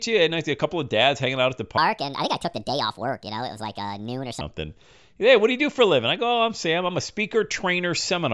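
From 1.78 s to 4.41 s the speech turns high and hurried, running 1.5 times too fast and about seven semitones sharp. This is a wrong sample rate fault: audio recorded at 16 kHz is played back at 24 kHz with no conversion, so speed and pitch rise together.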